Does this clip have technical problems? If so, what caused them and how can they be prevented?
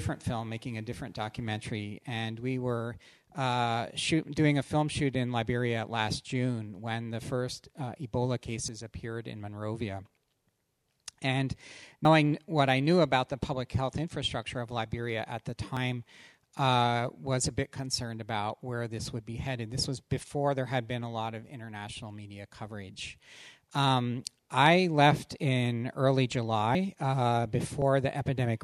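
Yes. The recording software likely fell behind and the hardware overwrote its samples before they were read, a dropped buffer (overrun). The audio jumps straight ahead with no gap, heard as a skip at 8.68, 12.05, 15.77, 26.75 and 27.82 s. Each skip loses roughly 20, 70, 50, 50 and 20 ms respectively. A larger buffer and less competing CPU load during capture would prevent it.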